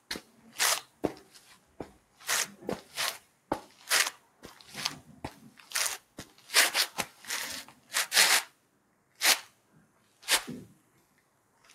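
Throughout, held tones and tails pump and thin, swinging by about 10 dB. A speech-oriented noise suppressor applied to music or sounds is treating steady material as noise. At 0.00–0.52, 0.85–2.22, 2.84–3.80, 4.18–4.65, 5.51–6.49, 7.67–7.92, 8.48–10.23 and 10.74–11.73 s, sustained and fading parts sink by about 8 to 9 dB and their decays end early. This is sound cut by the noise suppressor, mistaking it for background noise.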